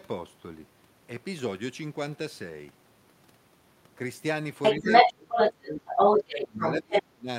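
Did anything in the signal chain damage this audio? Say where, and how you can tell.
Yes. Other side's voice leaking through appears from 4.62 to 5.13 s, 5.29 to 6.75 s and 6.91 to 7.03 s. A second voice sits about 10 to 15 dB under the main talker. The stage is call processing: the likely cause is an echo canceller that left loudspeaker pickup in the microphone signal. On a spectrogram, a second set of harmonic traces with different pitch contours overlaps the main voice in these stretches.

Speech suppressed in double talk runs from 4.79 to 5.31 s and from 6.24 to 7.29 s, overlapping the leakage. The talker's level dips by as much as about 30 dB, for roughly 0.4 s in the first stretch and 0.7 s in the second. This is likely the same echo canceller treating the overlap as echo and attenuating everything. The waveform envelope collapses in chunks, and the spectrogram shows harmonics fading or vanishing while the other side is active.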